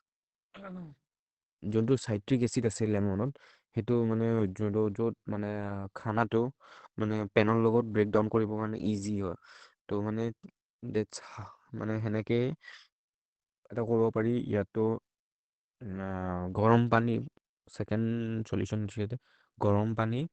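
Opus compression runs throughout this speech clip: nothing above 8.4 kHz and a plainly muffled, hoarse sound, likely from the codec's wideband SILK speech mode at a low bitrate around 16 kbps.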